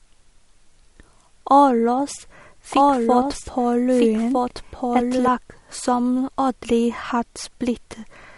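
Throughout, the speech stops dead above 11.2 kHz and keeps its coarse, smeared texture: likely low-bitrate audio saved at a high bitrate. Unlike a simple low-pass filter, it carries leftover codec artefacts.

From 2.72 to 5.28 s there is a doubled audio track: a full-band copy, a few dB quieter, trails by about 1.5 s and cuts in and out abruptly, with no echo-like decay.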